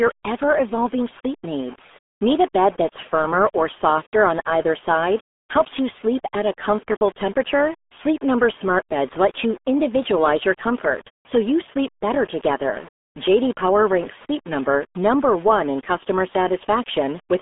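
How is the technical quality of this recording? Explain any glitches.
Quality's pretty rough: the whole recording carries the sound of the RealAudio 14.4 codec. From start to end the speech sits in a narrow band of roughly 250 Hz to 3.5 kHz, with nothing above 3.8 kHz. The codec squeezes everything into a very low data rate, which fits an 8 kbit/s dial-up-era stream, and the heavy coding damage leaves the speech muffled and gargly.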